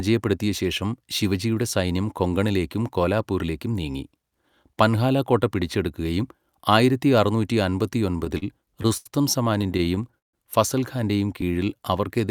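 Speech clip with repeated stalls (stutter) from 7.99 to 9.07 s, after "കോട്ട പിടിച്ചെടുക്കുകയും ആയിരത്തി അറുന്നൂറ്റി", and from 9.61 to 10.35 s, before "ഫസൽ ഖാന്റെയും". Late packets emptied the jitter buffer, so the last sound was held through gaps of up to 83 ms and 149 ms. A jitter buffer slow-down runs from 11.45 s to the end. Repeated pitch periods rebuild the reserve, adding 86 ms and playing at 91% speed with unchanged pitch.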